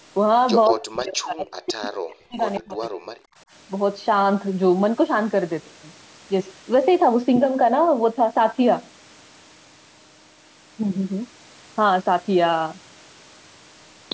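At 0.65 to 0.74 s there's a short echo leak, a copy of the speech arriving 172 ms late and only slightly quieter than the original. It's likely the far end's loudspeaker feeding its microphone, with the echo canceller letting that scrap through. A second, much fainter echo leak shows up at 2.55 to 2.61 s with the same delay.

Overlapping both, speech is suppressed in double talk from 0.69 to 2.41 s, and again from 2.59 to 3.33 s. The speech dips, at its deepest by around 40 dB, for about a second and a half in the first stretch and half a second in the second. That's likely the canceller ducking everything while both sides talked at once.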